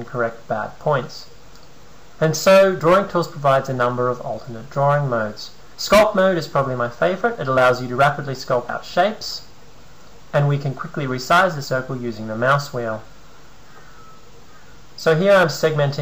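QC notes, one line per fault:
8.69 s and 14.59 s, audio missing between chunks: a brief skip of roughly 50 ms at each, sides butted together, likely lost where recording rolls over to a new chunk.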